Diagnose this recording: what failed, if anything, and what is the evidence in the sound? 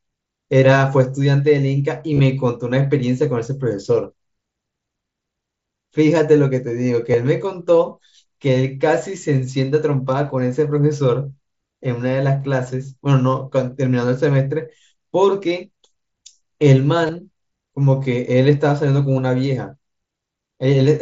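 The failure is concealed Bluetooth headset packet loss, on the wireless link between headset and phone. Three brief patches of speech are affected: 2.13 to 2.20 s, at 7.12 s, and 17.07 to 17.09 s. The first is the worst, with about 45 ms lost across 60 ms and a longest run of 30 ms. The receiver filled each gap by repeating the closest-matching recent stretch of waveform. That produces a held tone and a slight warble where real audio resumes. The wideband mSBC stream carries speech up to 8 kHz.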